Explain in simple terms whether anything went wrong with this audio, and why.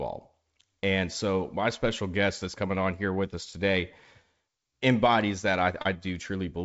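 Nothing went wrong here; the speech just comes through the way a wideband phone call normally does, with the sound stopping a little under 8 kHz as that kind of line is meant to.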